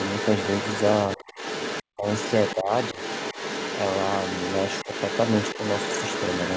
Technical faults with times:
0.00-6.57 other side's voice leaking through
1.93-2.06 speech suppressed in double talk
2.56-2.98 speech suppressed in double talk
4.86-4.92 speech suppressed in double talk

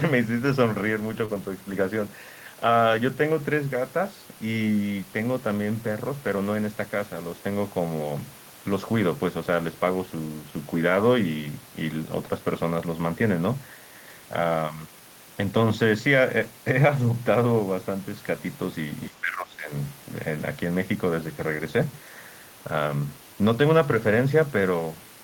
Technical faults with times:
1.25-1.30 short concealed packet loss
19.08-19.70 speech suppressed in double talk

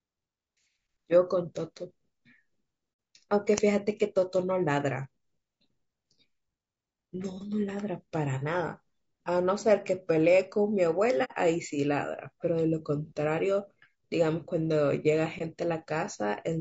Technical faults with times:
0.00-16.61 low-delay AAC compression
2.92-2.98 AAC frame loss with muting
11.24-11.32 AAC frame loss with muting

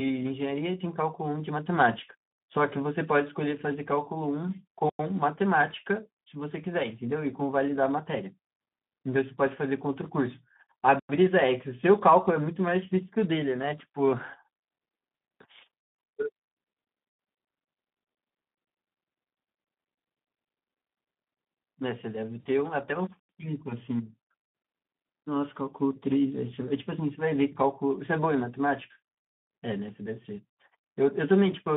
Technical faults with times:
0.00-31.76 Speex codec
22.39-22.47 VoIP packet loss concealed by the speech codec

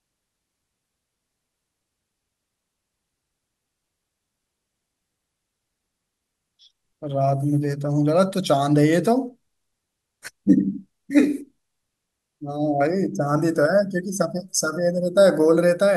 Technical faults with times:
none

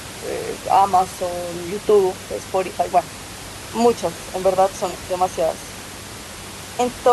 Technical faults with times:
none

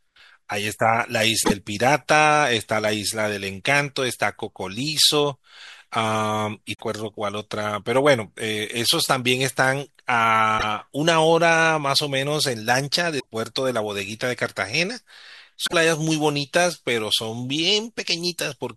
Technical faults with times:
1.41-1.52 damaged data in a compressed stream
6.73-6.81 damaged data in a compressed stream
10.55-10.64 damaged data in a compressed stream
13.19-13.25 damaged data in a compressed stream
15.64-15.73 damaged data in a compressed stream

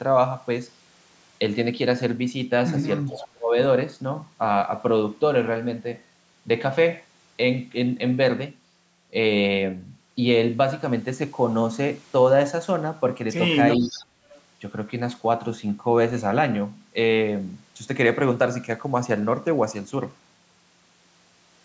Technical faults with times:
3.07-3.28 echo leak
3.08-3.56 speech suppressed in double talk
13.77-14.04 speech suppressed in double talk
13.92-14.41 echo leak

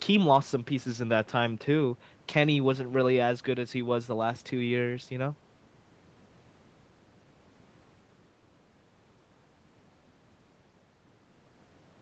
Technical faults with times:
none

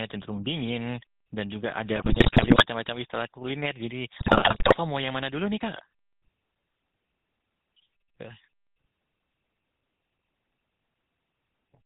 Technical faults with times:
0.00-11.85 GSM full-rate codec
1.96-2.66 GSM bit errors
4.18-4.76 GSM bit errors

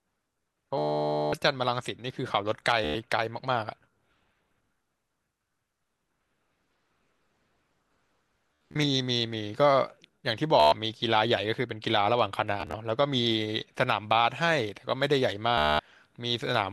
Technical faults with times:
0.78-1.33 Bluetooth stutter
2.84-2.95 Bluetooth stutter
8.71-8.84 Bluetooth stutter
10.60-10.72 Bluetooth stutter
12.61-12.74 Bluetooth stutter
15.58-15.79 Bluetooth stutter

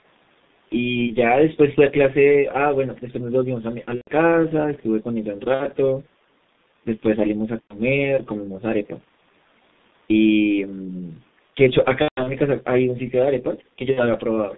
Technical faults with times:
0.00-14.58 G.723.1 codec
1.07-1.14 VoIP packet loss concealed by the speech codec
3.95-4.08 VoIP packet loss concealed by the speech codec
5.54-5.66 VoIP packet loss concealed by the speech codec
7.62-7.76 VoIP packet loss concealed by the speech codec
12.02-12.34 VoIP packet loss concealed by the speech codec
13.91-14.07 VoIP packet loss concealed by the speech codec

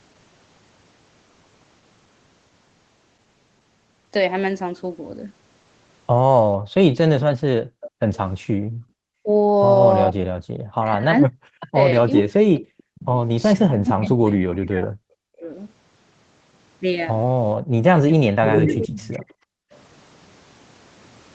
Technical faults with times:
6.57-8.91 background gated by the echo canceller
7.20-8.18 echo leak
9.19-15.49 speech suppressed in double talk
11.60-11.65 echo leak
14.54-14.58 echo leak
17.60-17.75 background gated by the echo canceller
18.10-19.40 speech suppressed in double talk
18.50-19.79 echo leak

